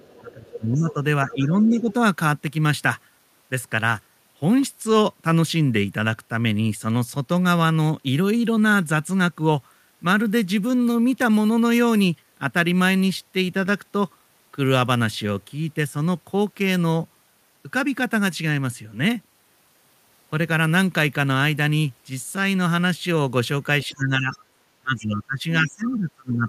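An echo canceller likely failing to remove loudspeaker pickup lets the other side's voice leak through: scraps of a second voice at 0.0–0.94 s and 1.29–1.93 s, about 15 dB under the talker, then fainter at 23.83–23.92, 24.32–24.37 and 25.85–25.96 s, about 25 to 30 dB down. The same canceller, likely confused by both sides talking at once, causes speech suppression in double talk, pulling the talker's voice down by up to about 20 dB at 0.2–1.9 s, about 15 dB at 23.86–24.35 s, and again from 24.81 s to the end.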